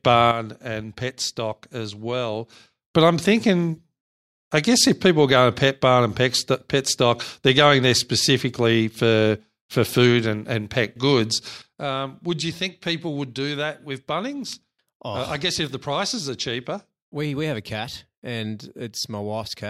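A speech clip with two sudden gain jumps. At 0.31 s the level drops by about 8 dB in a single step and stays down until 2.88 s, just before "but I'm thinking". At 11.62 s, right after "and and pet goods", it falls by about 9 dB and stays low to the end. Voice and background noise drop together, with no fade. The likely cause is a digital gain change applied without a ramp.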